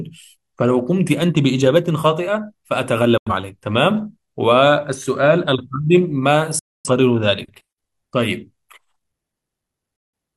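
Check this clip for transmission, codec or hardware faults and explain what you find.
Digital broadcast dropouts occur at 3.18 to 3.31 s, 6.59 to 6.89 s and 9.96 to 10.14 s. The receiver lost valid frames and muted, so the speech cuts to silence within 3 ms and resumes later, the missing audio gone. The gaps fit two, six and four lost frames.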